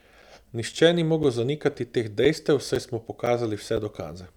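Short gaps between chunks occur at 0.22, 0.73, 1.23, 1.74, 2.25, 2.75, 3.26 and 3.77 s. Each is a hole of about 7 ms, repeating every half second, so the speech was likely joined from 0.5 s chunks with silence left at each boundary.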